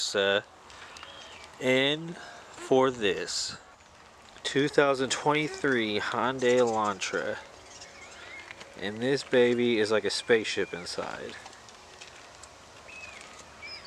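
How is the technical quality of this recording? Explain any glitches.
No glitches or technical faults can be heard here.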